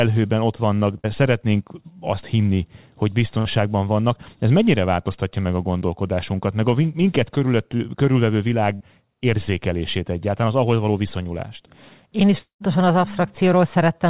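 Burst of packet loss at 0.98–1.06 s, right after "ott vannak" and before "szeretnénk azt": a run of packets was lost or arrived too late, so the receiver stretched the last sound, fading it down, for about 56 ms and then skipped about 60 ms of audio.

The same burst of packet loss recurs at 3.39–3.47 s, with roughly 63 ms of filled tail.

Short concealed packet loss at 5.79–5.83 s, just after "mennyire változtatja meg a": about 20 ms never reached the decoder, and the receiver patched the hole by extrapolating the preceding sound. It is heard as a brief smear or wobble rather than a clear gap.

A second short concealed packet loss falls at 7.77–7.81 s, again about 20 ms patched over.

Another burst of packet loss at 8.75–8.82 s, just before "érzékelését egyáltalán az ahhoz", holds the last sound for about 55 ms and drops about 60 ms.

Long network dropout at 12.38–12.62 s: the audio stops for about 220 ms, likely because no packets arrived during that stretch. 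The receiver continues the last sound, fading it out, which gives way to about 110 ms of silence before the audio resumes with a section missing.

Throughout, nothing is heard above 4 kHz, which fits a narrowband G.711 call path.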